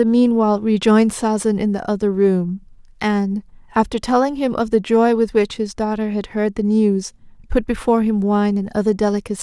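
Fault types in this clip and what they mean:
No technical fault can be heard anywhere in this speech clip. There is nothing to list for it.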